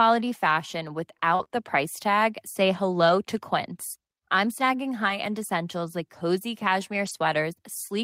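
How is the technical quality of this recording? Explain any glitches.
Two brief packet-loss glitches affect this speech recording.

From 1.35 to 1.53 s, just before "the price tag", repeated packet loss (robotic sound) occurs. Several holes, the longest about 38 ms, are patched by stretching the preceding sound. This gives choppy speech with audible gaps.

From 7.05 to 7.15 s, after "essentials like cozy", a lost packet rebuilt from error correction occurs. Following packets carried low-bitrate copies, so the 60 ms sounds rougher and noisier but has no gap. That missing gap is what distinguishes it from the earlier dropout.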